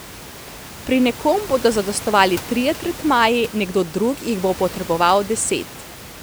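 Listening to this speech recording, nothing technical stood out as a problem.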